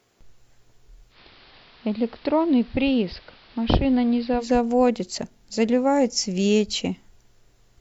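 Speech, with a case of digital radio blending to analogue from about 1.1 to 4.5 s. The receiver cross-fades over 115 ms into the AM feed, so level drops about 4 dB, and hiss comes up, sitting roughly 25 dB down, before it blends back.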